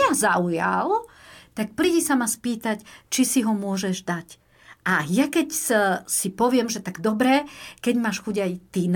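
No technical faults can be heard anywhere in the speech recording; the signal stays continuous and stable throughout.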